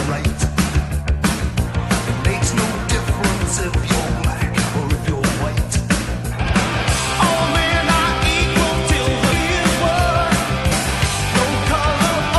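Damaged data in a compressed stream at 9.31 s and 10.71 s: corrupted bytes make the decoder misread frames and lose sync, producing brief glitches.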